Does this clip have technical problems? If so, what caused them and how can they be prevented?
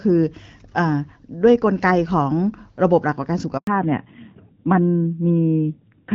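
Yes. At 3.57 s there's a handover gap: the call jumps networks and no speech frames arrive, so the audio drops out for about 100 ms. Keeping the phone on one stable cell, or using a network that does seamless handover, would prevent it.

From 3.67 s onward there's a fallback to narrowband: the call leaves HD Voice for an older codec, everything above 4 kHz disappears, and the sound turns dull and rougher. The quality fits a drop from AMR-WB at 12.65 kbit/s to AMR-NB at 7.4 kbit/s. Making sure both ends and every network along the path support HD Voice would keep the call wideband.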